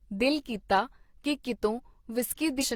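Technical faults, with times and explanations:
2.58–2.64 s, damaged data in a compressed stream: a brief glitch near the end where corrupted bytes throw the decoder off sync while it hunts for the next valid frame.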